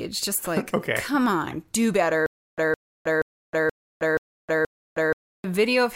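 From 2.26 s to 5.44 s, just after "come on do better", a stutter with silent gaps: one 163 ms burst repeats six times, each followed by 315 ms of digital silence. The waveform shows identical blocks between flat lines. The spectrogram shows matching slices separated by empty columns. It is likely a stalled stream replaying its last fragment, so the audio due there is lost.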